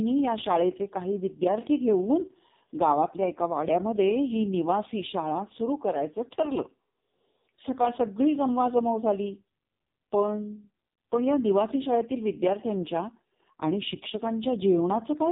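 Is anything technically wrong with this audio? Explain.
Yes. The speech runs through AMR narrowband mobile codec coding from start to finish. Nothing above about 3.8 kHz survives, so the sound is boxed into a telephone band. The codec rebuilds each 20 ms frame from a vocal-tract model excited by a handful of pulses. At this starved level, which fits AMR-NB's lowest 4.75 kbps mode, the damage is heavy: the voice comes out buzzy, thin and plainly synthetic.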